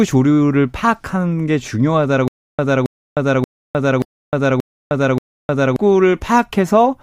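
From 2.28 to 5.76 s the speech catches on a 272 ms fragment that returns six times, each followed by about 309 ms of dead digital silence, a steady 581 ms cycle. This stutter with silent gaps likely comes from a stalled stream replaying its last buffer, so the intervening audio is lost.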